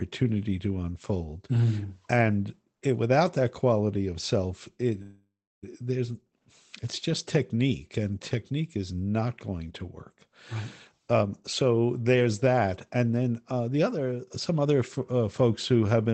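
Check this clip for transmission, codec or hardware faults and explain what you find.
Three faults show up, all from network delivery on a call link: one freeze and two stretches of jitter buffer speed-up. The band limit, with the top end stopping near 8 kHz, fits an Opus call path at a low rate of around 20 kbps.

Call audio freeze, 5.02 to 5.64 s: The packets were most likely held up in transit, so the receiver's jitter buffer ran dry and had nothing to play. It filled the gap by continuing the last sound, which trails off into about 0.31 s of silence. When delivery resumed, the audio picked up exactly where it had stopped. Nothing is lost, but about 0.6 s of delay has been inserted into the stream.

Jitter buffer speed-up, 11.11 to 11.86 s and 13.42 to 14.66 s: Delayed packets probably arrived in a burst, leaving the buffer holding more than its target. To shed that backlog, the receiver cut out many short pitch-period slices in succession, roughly a tenth of a second in each stretch. 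The pitch stays the same, but the sound plays faster: about 114% speed in the first stretch, which sounds noticeably rushed, and 108% in the second, which is milder.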